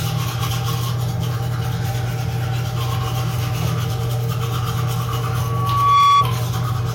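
From 5.34 to 6.28 s, a runaway microphone-speaker loop causes loudspeaker feedback squeal: a 1.1 kHz tone swells loudly, drawing one bright horizontal spectrogram line.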